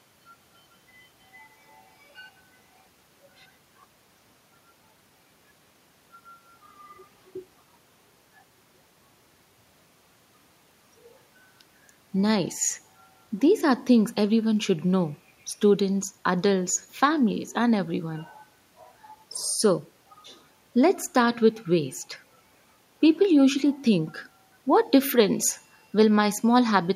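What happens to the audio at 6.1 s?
Nothing goes wrong at 6.1 s: the speech carries straight through that moment with no dropout, click, glitch or other fault.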